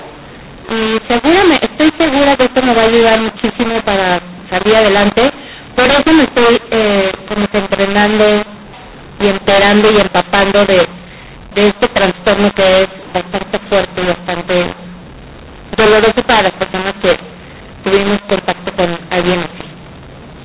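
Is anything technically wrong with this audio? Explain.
Yes. The speech carries one fault for its whole length: mu-law and A-law mixed up. The G.711 telephone coding itself is working, with its band ending at 4 kHz, which fits 8 kHz telephone sampling. The bytes were written with the mu-law curve but expanded with the A-law curve. The two logarithmic scales disagree, so each level maps to the wrong amplitude, some too loud, others too quiet, and near-silent samples jump well above zero. The speech sounds harsh and distorted, and the gaps between phrases fill with hiss. On a waveform, the envelope looks jagged and the pauses never settle to a flat line. A spectrogram shows a broadband noise floor smeared up to 4 kHz, even in the pauses.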